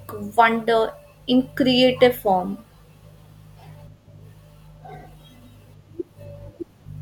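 A speech clip that, from 2.09 s to the end, carries a steady 43.1 Hz buzz over the voice. This is a block size mismatch (truncated): the tail of each block is discarded, and the buzz rate fits 1024-sample blocks being written.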